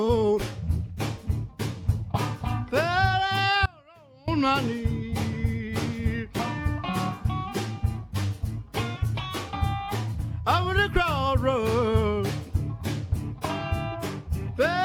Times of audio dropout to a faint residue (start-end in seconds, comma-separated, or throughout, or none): 3.66-4.28